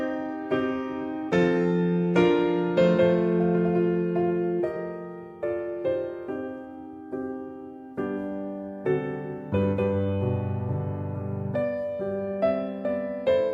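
No technical faults can be heard anywhere in this audio.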